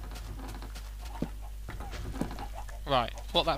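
At 1.05 s and again at 2.67 s, compressed frames are skipped. A run of whole frames, each about 46 ms long, is missing or was rejected by the decoder as damaged. Both times the audio jumps forward by roughly a fifth of a second, around four to five frames.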